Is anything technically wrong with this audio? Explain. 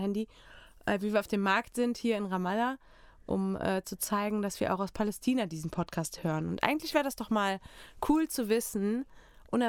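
Yes. From 5.66 to 6.60 s, just before "eigentlich wäre das doch", the speech shows a Bluetooth SBC bit pool drop. Under link congestion the encoder spends far fewer bits per frame, which fits a fall from a bit pool of 28 to one near 13, around 102 kbps. The upper sub-bands get nearly nothing, so the treble goes dull, and coarse quantisation adds gritty noise. Unlike a dropout or packet loss, the sound never stops; it degrades, then recovers.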